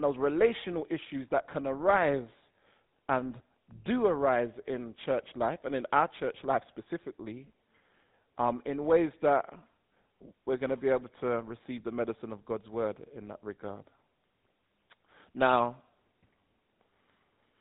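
From start to end the speech carries GSM full-rate codec damage: a harsh, buzzy graininess from the coarse pulse-driven excitation, with nothing above 3.9 kHz. That gritty buzz, fitting the 13 kbps full-rate codec, separates it from simple band-limiting, which muffles without roughening.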